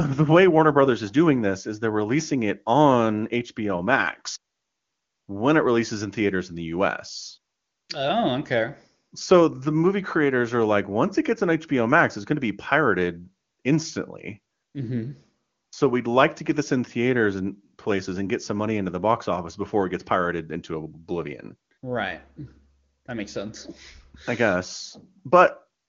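No faults found in the speech; the band limit near 7 kHz fits the AMR-WB wideband (HD Voice) path, whose coding damage is faint at most, consistent with its top 23.85 kbit/s mode.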